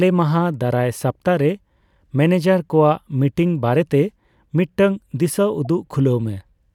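At about 5.65 s there's a short blip in the speech, a corrupt frame decoded: some bits in one compressed frame got flipped, and the decoder played it anyway, putting energy at the wrong frequencies. It lasts only a frame and peaks around -30 dBFS, so it's a quick chirpy tick.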